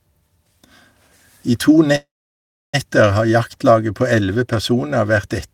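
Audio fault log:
1.95–2.75 s call audio freeze: after "I to" the sound stalls, trails into 0.68 s of silence, then resumes with nothing lost, likely from late packets emptying the jitter buffer.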